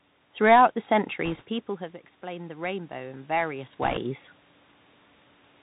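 Throughout, the speech passes through a Bluetooth CVSD headset codec. Its one-bit delta steps, consistent with a 64 kbps link, can't follow fast, loud high content, and nothing above 4 kHz survives. The result is a dull, narrowband sound with scratchy sibilants and a granular hiss underneath.

From 1.25 to 1.44 s, bit errors on the Bluetooth voice link corrupt a small share of the bitstream, a couple of percent. Each flipped bit nudges the waveform only slightly, so there are no sharp clicks. Instead, a rushing, crackly noise rides over the speech.

Between 2.2 and 4.12 s, automatic gain rising sets in. The input level falls by about 13 dB, and the gain control responds by gradually adding about 6 dB. Voice and room noise swell together over nearly two seconds.

Within that span, from 3.82 to 3.98 s, bit errors on the Bluetooth voice link return at a slightly higher rate, roughly 3 percent. 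They bring the same rushing crackle, now a little denser than in the earlier burst.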